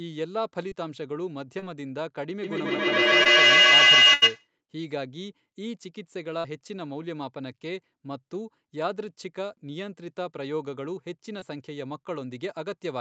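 At 0.69 s and 1.59 s, short concealed packet loss leaves brief smears where about 20 ms of the call never arrived and the receiver stretched the last sound over the hole. As with a burst, that stretch of audio is missing.

From 2.43 s to 4.50 s, a feedback howl near 3 kHz builds to about 16 dB above the speech, pulsing roughly every 150 ms. Unlike echo, the repeats grow instead of fading, because the loop between two devices in one room gains level on every trip. Beneath it, another short concealed loss at 3.23 s adds a wobble.

From 4.14 s to 4.24 s, a burst of packet loss drops 80 ms. The held sound is heard fading before the audio resumes further on, which is longer than the short smears.

Short concealed losses return at 6.40 s, where a 40 ms gap gives a longer smear, and at 11.40 s, where a 20 ms gap leaves a brief smear.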